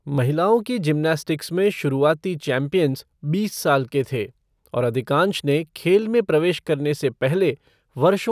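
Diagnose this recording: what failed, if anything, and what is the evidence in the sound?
Nothing in the signal chain has failed: across the whole recording there is no dropout, click, distortion, level jump or other fault at any stage.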